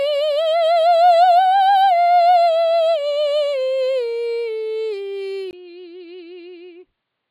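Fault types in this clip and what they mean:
Input switched to a poorer device: from 5.51 s to the end, the music cuts out for a brief 20 ms gap and comes back duller and quieter, most likely because the recording input changed to a lesser microphone or a headset's call profile. The new path passes nothing above 4.8 kHz, so the top end vanishes. The level falls by roughly 10 dB, and a faint new noise floor sits far beneath the music.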